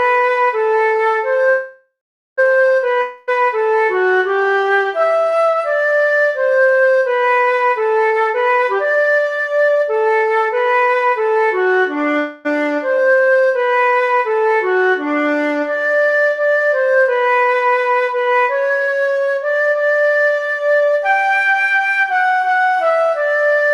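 At 1.49 s the sound stalls until 2.40 s, a call audio freeze. The last sound is stretched into a fading buzz that decays to silence for roughly the final 0.44 s of the 0.88 s hold. The likely cause is packets held up in transit, draining the jitter buffer. Playback then resumes where it stopped, so nothing is lost, but the stream now runs about 0.88 s later.

From 3.02 s to 3.29 s a long network dropout follows. A fading buzz again covers the gap, though it never reaches silence within these 0.26 s. When the audio returns, about 0.26 s of material is simply gone, the likely result of packets that never arrived.

Between 8.05 s and 11.28 s a jitter buffer speed-up runs the audio at about 126 % of normal speed while pitch stays put. The receiver trims short pitch-period pieces repeatedly to shed excess buffered delay, cutting around a second in total, which makes the passage sound noticeably hurried.

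A second call audio freeze appears at 12.19 s to 12.47 s. It is a brief fading fill of 0.26 s with no silent stretch, after which playback continues intact but about 0.26 s later. A held-up packet burst is the likely cause.

A milder jitter buffer speed-up runs from 18.70 s to 20.68 s at about 114 %, removing roughly 0.3 s. The rushing is audible but less pronounced than in the first one.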